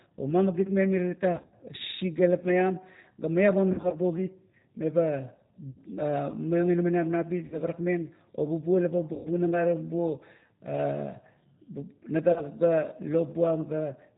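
A speech recording carrying plainly audible G.729 codec damage for its whole length. The band stops sharply at 4 kHz, so sibilants and consonant edges lose their top end and the voice sounds boxed in. Within that band the speech is rebuilt from a vocal tract filter, a pitch predictor and a handful of pulses per 10 ms frame, which gives it a rough, slightly synthetic buzz. This character fits G.729A at 8 kbit/s.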